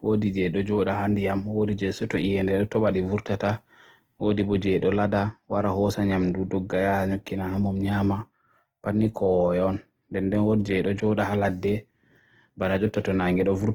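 Speech throughout, with plainly audible Opus compression: tones come out grainy and rough rather than swirly, likely from a low-rate music-mode encode around 16 kbps, still fullband to 20.2 kHz.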